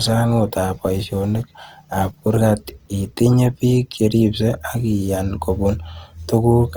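Throughout the speech, the sound is rough and grainy, with tones turned noisy rather than swirling. Bands stay filled up to about 20.2 kHz. The cause is likely Opus compression in its music mode, at a rate that fits roughly 24 kbps.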